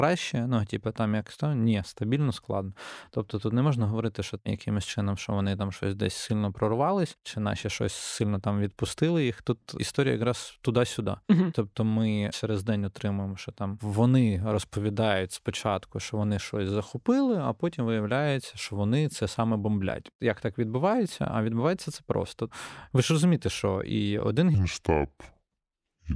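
From 24.55 s to the end at 26.15 s, the speech drops into a wrong sample rate: the samples play back at about 0.69 times their original speed, so the voice slows and falls roughly 6.5 semitones, sounding low and dragged, which fits 32 kHz audio read at 22 kHz without conversion.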